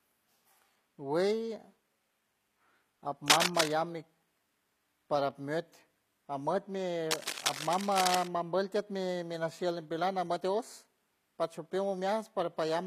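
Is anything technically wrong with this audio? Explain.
Yes. Throughout the speech the upper spectrum sounds rebuilt rather than recorded, pointing to likely HE-AAC compression at a low bitrate, something like 24 kbps. The codec damage is plainly audible: the treble above the coded band is synthesized by copying lower bands upward and shaping them with a coarse envelope, so its harmonics don't line up with those below and s sounds come out gritty and metallic. On a spectrogram the upper region shows repeated, blocky patches echoing the lower bands, with nothing at all above 14.9 kHz.

Cable scratch noise also appears twice, from 3.28 to 3.73 s and from 7.11 to 8.28 s. Each burst sounds like scratching or rustling laid over the speech, likely from a worn cable, connector or control carrying a DC voltage being moved so that its contact resistance jumps around rapidly. The first burst sits roughly 5 dB above the speech, the longer second one roughly 5 dB below it. 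On a waveform they show as dense, uneven crackle, and on a spectrogram as broadband speckled smears across those spans.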